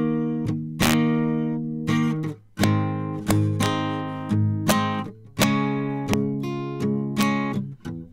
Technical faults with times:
0.82-0.93 integer overflow
2.64 integer overflow
3.31-3.66 integer overflow
4.69-4.72 integer overflow
5.42 integer overflow
6.13 integer overflow
7.21 integer overflow

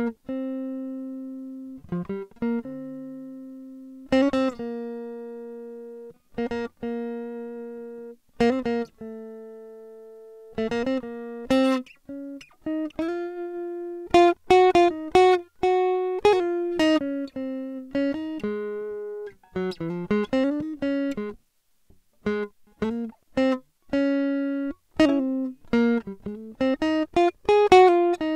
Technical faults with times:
none

